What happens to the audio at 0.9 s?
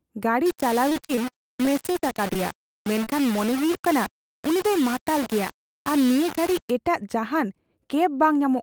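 At 0.9 s the speech turns choppy, with short stutters where fragments of sound drop out. This is repeated packet loss, which runs from 0.89 to 2.37 s. Packets go missing or arrive too late again and again, and each hole is patched by stretching the last received sound forward. About 196 ms is concealed this way, roughly 13% of the stretch, and another 160 ms is simply missing. The longest single gap is 38 ms, and the frequency of the dropouts suggests around a dozen separate losses.

Underneath that, the speech is already grainy and gritty, and the rasp shifts with the loudness of the sound. The quieter parts break up or sputter. This is low bit depth without dither, which spans 0.46 to 6.7 s. The likely cause is that the samples were rounded to very few levels without added noise, as coarse as about 4 bits. The rounding error follows the signal and sits only about 15 dB below it.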